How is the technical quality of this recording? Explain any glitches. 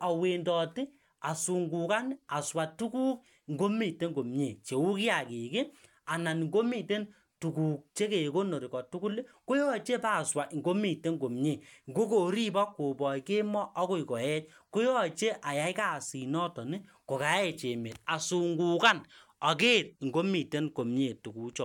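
The speech recording has no audible technical glitches; the signal stays steady and intact throughout.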